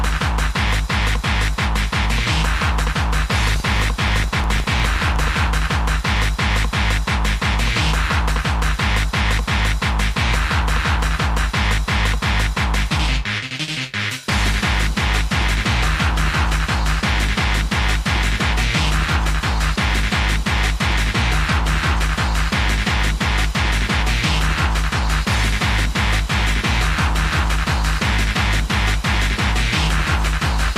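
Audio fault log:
3.48–5.52 s, filter restarted on every block: a buzz at 25 Hz sits on the audio for about two seconds, made of evenly spaced ticks that rise and fall with the signal's level. The filter is dropping its stored state at each block boundary and starting again from silence, so every block opens with a small transient. Those transients repeat at the block rate, and a 25 Hz rate points to blocks about 40 ms long.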